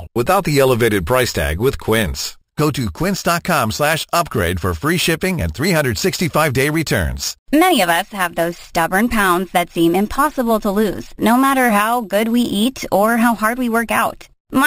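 Speech, with imaging from sample-and-hold upsampling throughout: a bright metallic fizz mirrored into 6 to 12 kHz, about 16 dB below the signal, which points to 12 kHz audio raised to 44.1 kHz by unfiltered sample repetition.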